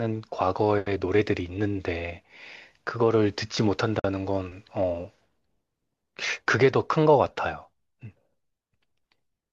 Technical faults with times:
3.99-4.04 gap at a join of encoded pieces

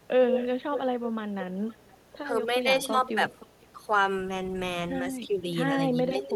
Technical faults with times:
0.00-6.36 video or display buzz
0.04-1.10 echo leak
1.69-1.98 echo leak
2.18-2.23 speech suppressed in double talk
2.82-2.88 echo leak
3.29-3.67 echo leak
3.72-3.85 speech suppressed in double talk
6.10-6.36 speech suppressed in double talk
6.23-6.27 echo leak

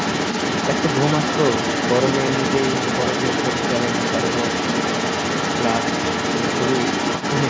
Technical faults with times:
0.00-7.49 other side's voice leaking through

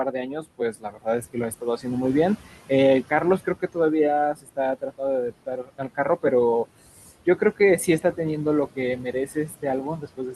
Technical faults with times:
0.00-10.36 noise suppressor artifacts
0.12-1.86 speech cut by the noise suppressor
3.03-3.77 speech cut by the noise suppressor
4.34-6.24 speech cut by the noise suppressor
7.26-8.19 speech cut by the noise suppressor
8.76-10.36 speech cut by the noise suppressor

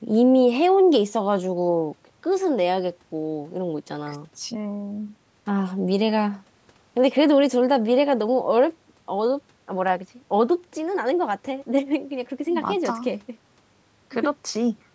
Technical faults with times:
none

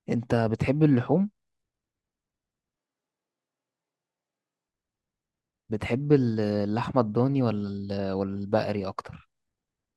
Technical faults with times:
2.77-4.68 switch to a distant microphone

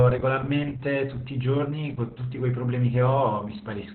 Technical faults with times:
0.00-3.94 Opus voice compression

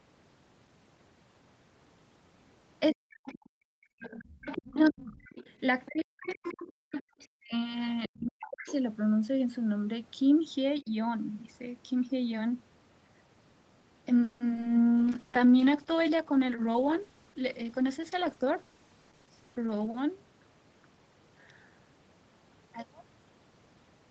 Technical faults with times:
2.92-3.14 speech suppressed in double talk
3.12-8.73 other side's voice leaking through
3.43-4.00 background gated by the echo canceller
4.64-8.70 speech suppressed in double talk
6.73-6.92 background gated by the echo canceller
10.82-10.89 speech suppressed in double talk
14.23-14.64 repeated packet loss (robotic sound)
14.93-15.11 jitter buffer slow-down
15.00-20.27 call bitrate drop
16.31-18.50 jitter buffer speed-up
19.58-20.04 jitter buffer speed-up

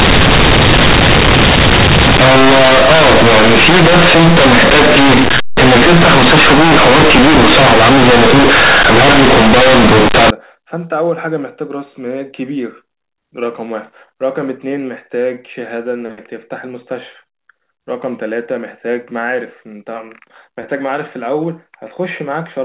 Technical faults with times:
0.00-10.30 companded audio read as linear

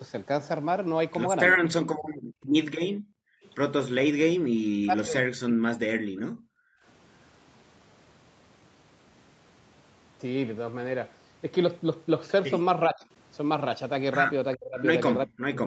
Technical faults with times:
2.03-3.49 echo leak
2.14-3.43 background gated by the echo canceller
3.99-5.80 speech suppressed in double talk
6.08-6.84 background gated by the echo canceller
12.88-15.66 speech suppressed in double talk
14.54-15.66 echo leak

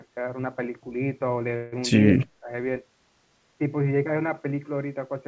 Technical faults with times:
1.56-1.75 call audio freeze
2.16-2.50 speech suppressed in double talk

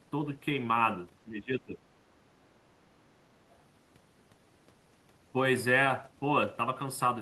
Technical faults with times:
0.00-7.22 channel delay (comb filtering)
1.24-1.82 speech suppressed in double talk

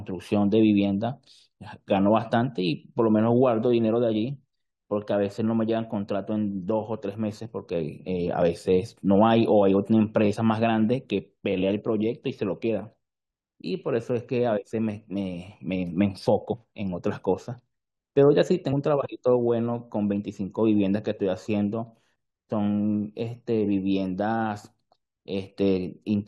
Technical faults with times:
16.52 damaged data in a compressed stream
18.72 damaged data in a compressed stream

